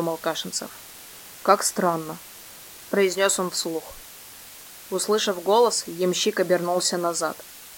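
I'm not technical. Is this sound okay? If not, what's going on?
No. A steady, even hiss runs under the sound from start to finish, fairly loud next to the sound itself, but without crackle or harsh distortion. This is low bit depth with dither: the audio is stored with very little detail, which fits about 7 bits, and a small random noise mixed in before rounding turns the coarse steps into that constant hiss.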